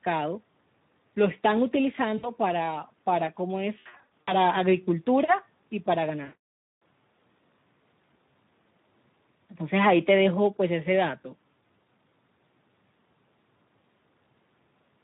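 Speex codec compression runs through the whole speech recording, from start to end. The plainly audible damage points to a low-quality setting, consistent with roughly 11 kbps. At that rate the CELP coder has too few bits to describe the excitation signal driving its vocal-tract filter, so the voice comes out hoarse and grainy with a noisy edge. Any content above 8 kHz is only a shaped, noise-like fill rather than real detail.

VoIP packet loss concealed by the speech codec occurs at 2.17–2.29 s, 3.79–4.33 s and 6.23–6.81 s. Each time, missing audio was rebuilt by extending the last pitch and filter while fading the gain. The first gap covers about 60 ms. The second scatters 260 ms of losses across nearly half a second, with runs up to 80 ms. The third is a solid 580 ms stretch of rebuilt, fading sound, with the voice staying weakened briefly afterwards.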